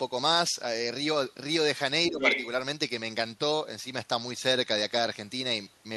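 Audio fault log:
2.09 to 2.19 s, speech suppressed in double talk. The talker dips by about 10 dB for a tenth of a second. Likely the echo canceller ducking both sides at once.
2.19 to 2.48 s, other side's voice leaking through. A second voice comes through, roughly as loud as the talker. This is likely echo the canceller failed to remove from the microphone.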